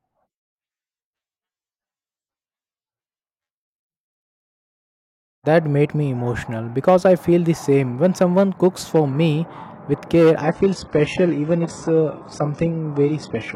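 An adaptive stream at a lower bitrate takes over at 10.42 s, just after "for me with care", and lasts to the end at 13.56 s. The player evidently switched down to a cheaper version when the connection slowed, with no gap at the join. The speech turns dull, with nothing above 11 kHz and rising codec artefacts. This fits a drop from around 96 kbit/s AAC to a 12 kbit/s HE-AAC rendition.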